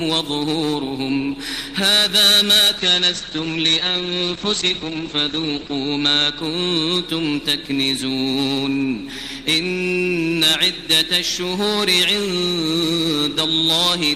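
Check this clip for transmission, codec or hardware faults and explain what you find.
One transmission fault: a call bitrate drop from 2.78 to 6.47 s. The encoder's budget collapsed, which fits a fall from about 32 kbps to 11 kbps, and coding bandwidth narrowed from 20 kHz to 8 kHz. For roughly three seconds the audio turns muffled and rough.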